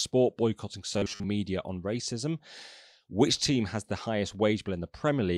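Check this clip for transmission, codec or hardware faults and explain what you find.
One fault stands out in this speech clip. Robotic sound from repeated short buffers runs from 0.94 to 1.26 s, ending just before "on racism". The likely cause is audio arriving too seldom, so the playback side fills the gaps by looping the last fragment while real audio is skipped; about half the stretch is repeated material. The loops recur at 100 Hz, which fits a 10 ms fragment, imposing a rigid metallic buzz at that rate that only roughly follows the original speech.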